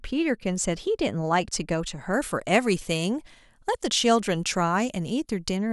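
Speech, with pre-emphasis left on from 2.13 s to 5.57 s: the treble boost was never undone by matching de-emphasis, lifting 10 kHz about 11 dB above 1 kHz, which fits the FM 50 µs curve. The section sounds thin, bright and sibilant.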